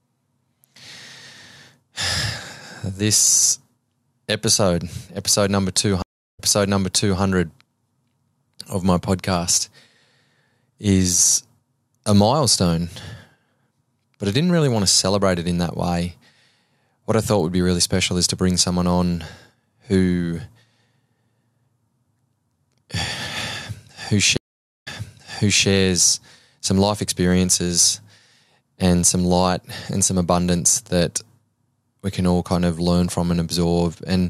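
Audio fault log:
6.02–7.21 s, stream reconnect: after "episode episode number", a 0.35 s flat waveform gap, then playback resumes 0.84 s earlier, repeating audio with a brief fade-in.
24.37–25.67 s, stream reconnect: a 0.47 s blank spectrogram band as the decoder restarts, then audio resumes 0.84 s earlier, repeating audio with a brief fade-in.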